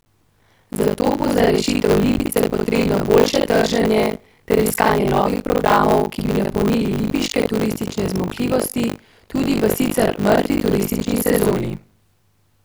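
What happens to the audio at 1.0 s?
Buffer tearing at 1.0 s, as throughout: writer and reader cross inside each buffer, so roughly two fifths replays speech about 70 ms old, buzzing robotically at 50 Hz.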